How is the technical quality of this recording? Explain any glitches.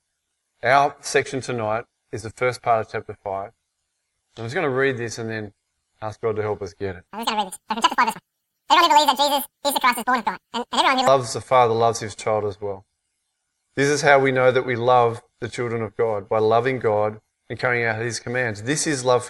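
One section has a clear playback fault. From 7.07 to 11.07 s there is a wrong sample rate error: the samples run twice as fast as intended without conversion, which fits 24 kHz material played at 48 kHz. Speed doubles and pitch jumps a full octave (12 semitones), so the audio sounds rushed and thin.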